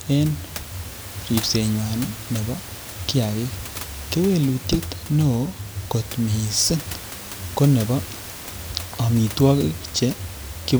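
A speech recording with no technical faults to report. Some background noise from the room can be heard, sitting about 14 dB below the speech, and it belongs to the recording environment rather than the system.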